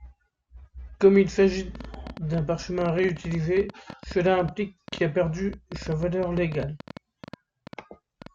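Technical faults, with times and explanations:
1.75–8.27 s, train of clicks: Right after "il s'agit", a run of about fifty short, similar pops starts and goes on almost to the end of the speech. They arrive at an uneven pace, close to 9 per second, and peak about 5 dB above the voice, so they tick through the pauses as well as the words. The likely cause is electrical interference or a faulty connection or power supply adding repeated impulses. On a waveform they show as thin vertical spikes, and on a spectrogram as narrow broadband vertical lines at irregular spacing.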